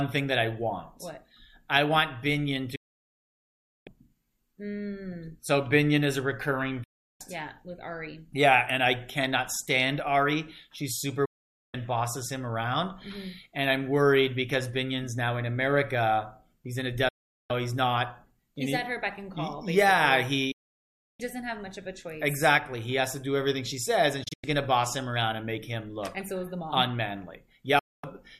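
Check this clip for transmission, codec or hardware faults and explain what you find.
The audio has seven digital broadcast dropouts, at 2.75–3.87 s, 6.83–7.21 s, 11.25–11.75 s, 17.08–17.51 s, 20.51–21.20 s, 24.23–24.44 s and 27.79–28.04 s. Each time, the receiver stopped getting decodable frames and muted, so the sound fades out within about 8 ms, goes silent, then resumes further on with that stretch missing. Gaps run from about 0.14 s to 1.1 s, consistent with whole 24 ms frames being discarded. At 24.23 s the loss is broken into several short holes across about 0.19 s, the longest about 0.1 s.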